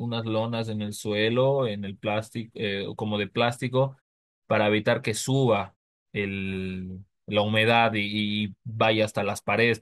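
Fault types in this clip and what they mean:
No technical faults are present in this speech recording, and the background falling silent in the gaps between phrases and returning in time for the next sound is expected behaviour rather than a defect.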